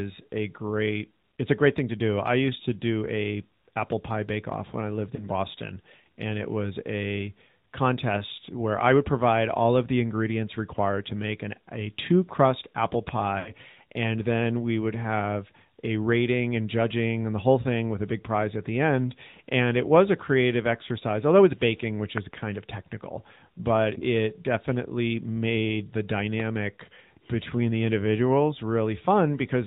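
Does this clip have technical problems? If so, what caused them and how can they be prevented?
Yes, there are three kinds of problem here.

The whole speech clip has been through the AMR narrowband mobile codec. Nothing above 4 kHz survives, so it sounds boxed-in like a phone call. The codec rebuilds the voice from a vocal-tract model and a handful of pulses, and the damage is plainly audible as a buzzy, synthetic edge that points to a mid-rate mode around 10 kbps. To prevent it, record or route the call over a wideband or full-bandwidth path instead of a 2G/3G narrowband link.

There are also lost AMR speech frames. Right after "off when I lived", from 5.16 to 5.28 s, there's a short warble and dip, consistent with a single 20 ms frame failing its check while the decoder patched over it with the last good settings. After "a two crust apple", from 13.40 to 13.53 s, the gap is longer, more like 60 ms. 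The sound smears, sags and then returns a bit rough. Better radio coverage, or capturing the audio at the source rather than off the mobile link, avoids these dropouts.

Finally, between "although it's baking which" and "of technical but it", around 22.18 to 22.36 s, there's a loud pop, actually two in quick succession, sitting roughly 15 dB above the speech, which carries on underneath. That's likely an electrical glitch such as a plug, switch or static discharge hitting the signal chain. Secure connectors, leave switches alone while recording, and ground the gear properly to stop it happening.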